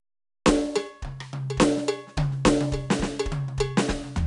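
Throughout the music, 4-bit ADPCM compression encodes each sample as a coarse step from a predicted value, consistent with roughly 88 kbps. The quantisation error rides along as plainly audible gritty hiss beneath loud passages, and nothing above 10.6 kHz survives, dulling the top end.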